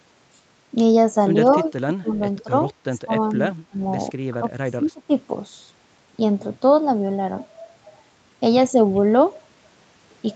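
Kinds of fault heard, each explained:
Echo leak: Around 1.66 to 1.72 s there's a brief, very faint delayed copy of the speech trailing about 158 ms behind, sitting roughly 30 dB under the main voice, so it's just a ghostly scrap rather than a clear repeat. The likely cause is a loudspeaker on the far end whose echo canceller didn't fully scrub what its mic picked up, so a bit of the call got sent back.
Speech suppressed in double talk: The talker's level keeps ducking in short bites at 2.0 to 2.2 s, 2.43 to 2.5 s, 3.05 to 3.13 s and 3.63 to 3.8 s, then for a longer stretch from 4.32 to 5.11 s. The drops are deep, somewhere around 15 to 25 dB. This is likely an echo canceller confused by both sides talking at once, pulling down the real voice along with the echo it was chasing.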